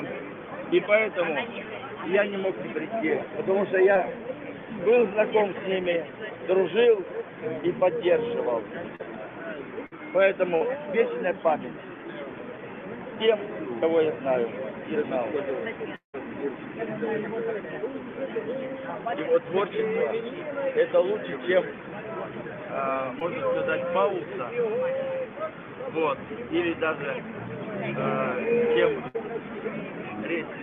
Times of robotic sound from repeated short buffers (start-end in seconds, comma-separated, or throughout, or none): none